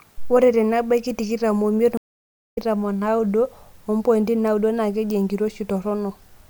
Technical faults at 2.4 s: stream reconnect

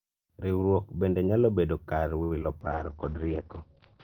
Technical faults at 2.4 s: short stall from a late packet; short concealed packet loss

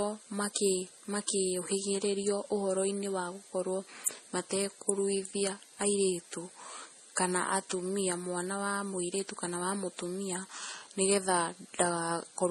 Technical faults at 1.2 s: transcoding between lossy codecs

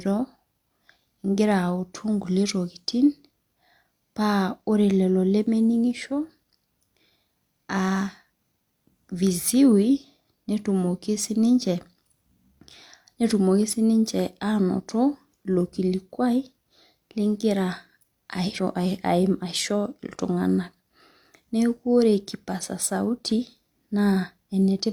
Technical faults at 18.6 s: compressed frames skipped

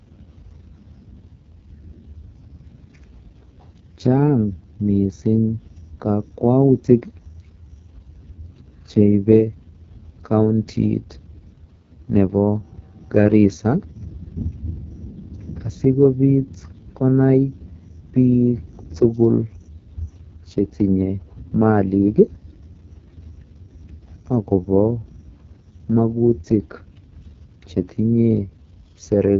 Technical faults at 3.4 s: AMR wideband (HD Voice) codec

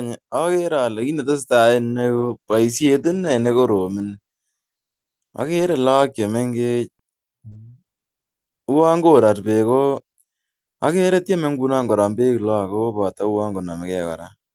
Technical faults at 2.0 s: microphone volume stepped up

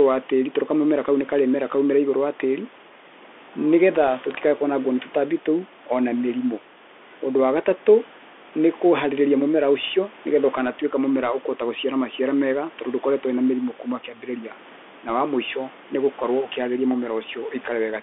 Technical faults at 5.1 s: Bluetooth CVSD headset codec

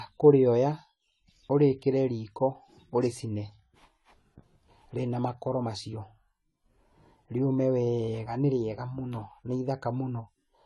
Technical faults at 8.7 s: AAC compression

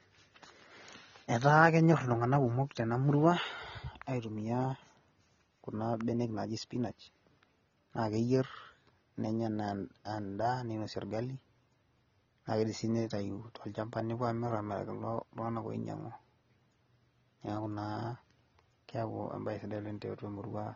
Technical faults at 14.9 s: AAC compression

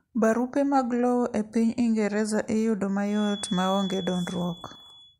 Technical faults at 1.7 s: none

